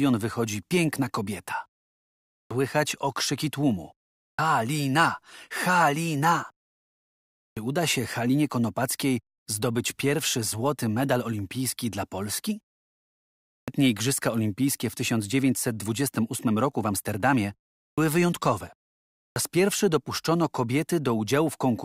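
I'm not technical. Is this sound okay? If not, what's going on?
No. Clipped start after a pause happens at 2.38, 4.26, 7.45, 13.55, 17.84 and 19.23 s. During each short silence, the playback device dozes off and takes about an eighth of a second to wake, so the first sound of the next word is cut off.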